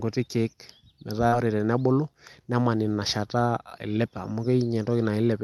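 A brief smear in the speech runs from 1.27 to 1.34 s. This is short concealed packet loss: about 40 ms of the call never reached the decoder in time, so the receiver extended the preceding sound to cover the gap, then blended back.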